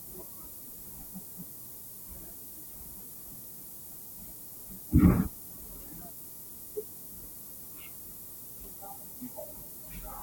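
From start to finish the speech carries low bit depth with noise shaping. Each sample holds only about 7 bits, so the rounding error is large. That error is fed back and pushed toward high frequencies, away from the middle of the band. The result is a steady, thin hiss that climbs sharply toward the top end. It sits only a few decibels below the speech, nearly as loud as the voice itself.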